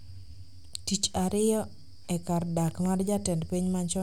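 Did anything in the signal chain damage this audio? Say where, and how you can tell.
Yes: a loud pop, actually a double one, from 2.68 to 2.88 s, a few dB above the speech; likely a voltage spike in the analogue wiring.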